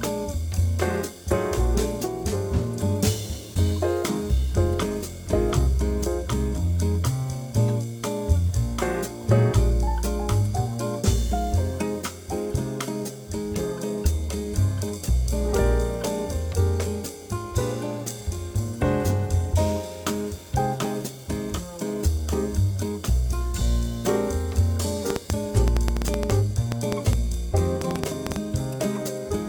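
From 25.10 s to 28.37 s a train of clicks sits over the audio: around twenty short, similar pulses arriving at an average of about 6.5 per second, but with uneven spacing rather than a steady beat. Each click peaks well above the programme, on the order of 20 dB, so they read as sharp popping and ticking that stays audible through quieter passages. The likely cause is electrical interference from nearby equipment or an interface intermittently failing.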